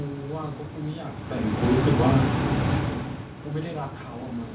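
No technical faults can be heard in this speech recording. It has come through a narrowband call path, with nothing above 4 kHz, which fits G.711 A-law at 64 kbps, and the background room sound and the shifts in level around 1 s and 2.5 s, where the talker moves relative to the microphone, are part of the recording itself.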